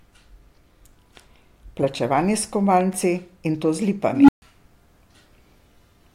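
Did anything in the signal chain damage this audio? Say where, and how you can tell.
Yes. Loud pop, 2.81–2.95 s: two sharp thumps jump above the speech, likely a voltage spike in the analogue wiring from a plug or switch.

Unstable filter, 4.11–4.42 s, in call processing: a tone near 300 Hz swells over 174 ms, clips and overflows, leaving 136 ms of silence before it resets.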